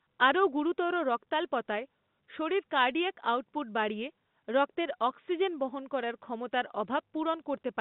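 No technical faults can be heard in the speech, which carries the narrow band of ordinary G.711 telephone coding, with content confined to roughly 150 Hz to 3.7 kHz.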